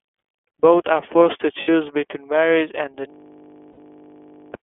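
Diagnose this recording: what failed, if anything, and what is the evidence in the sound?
iLBC codec, present for the whole clip, at the codec stage. The speech is confined to a telephone band of roughly 300 Hz to 3.4 kHz, with plainly audible coding damage: a rough, slightly synthetic edge on the voice. iLBC codes each frame's excitation independently. The texture fits its 30 ms frame mode at 13.33 kbps, where the coarse excitation model and narrow band strip detail and air from the voice.

Lost iLBC frames, at 1.62 to 1.69 s and 3.71 to 3.79 s, at the network stage. Each gap lasts about 60 ms, which fits two lost 30 ms frames. The first falls just after "are forced to" and just before "between marriage and the", and the second comes just after "between marriage and the". The decoder covered each hole by repeating the last pitch cycle blended with noise, heard as a brief held, buzzy vowel. 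Because iLBC frames stand alone, the voice snaps back cleanly right after each gap.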